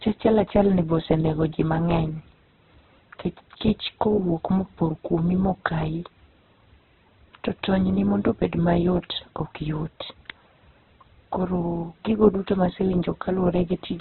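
Speech that has likely passed through Opus compression in its CELT mode at a very low bitrate, consistent with about 8 kbps. The encoder has narrowed the band to narrowband, leaving nothing above 4.1 kHz, and heavy codec damage makes tones grainy, rough and noisy throughout.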